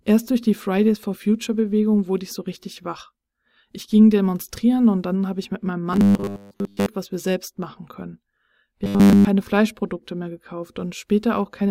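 From 5.93 to 6.87 s and 8.84 to 9.27 s, the speech becomes a robotic sound from repeated short buffers. A rigid 100 Hz metallic buzz sits over the speech. The first stretch is mostly repeats, the second entirely. Late-arriving audio likely forced a 10 ms chunk to loop.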